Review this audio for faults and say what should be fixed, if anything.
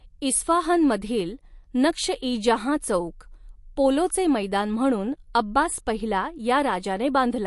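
Throughout the speech there is a watery, swirling quality, with chirpy, metallic s sounds and nothing above 11.3 kHz. The likely cause is MP3 compression at a low rate, which fits about 48 kbps: the encoder discards the treble and lets faint frequency components flicker between frames. Keep a lossless master and encode at a higher bitrate.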